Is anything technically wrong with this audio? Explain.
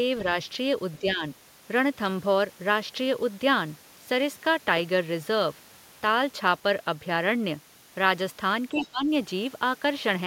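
Yes. Speech suppressed in double talk occurs at 0.99 to 1.23 s and 8.72 to 9.08 s, with the voice dipping roughly 10 dB, then 15 dB, likely because the echo canceller attenuated everything during simultaneous talk.

The other side's voice leaks through at 8.76 to 8.86 s as a brief scrap roughly 15 dB below the speech, likely loudspeaker echo the canceller left in.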